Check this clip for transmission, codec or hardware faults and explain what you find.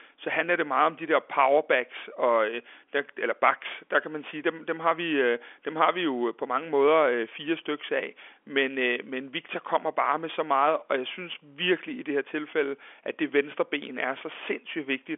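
One hardware fault runs through the whole speech clip: sample clock jitter. The converter's clock wanders by roughly 10 microseconds, so each sample lands a little early or late. Steep, bright parts of the waveform suffer most, leaving a rough hiss only about 20 dB under the speech. It swells on loud, high-pitched sounds and disappears in pauses, which separates it from a steady noise floor. It is also far coarser than the faint, level-following grain of the telephone coding, which is the usual narrow line band cutting off near 3.6 kHz.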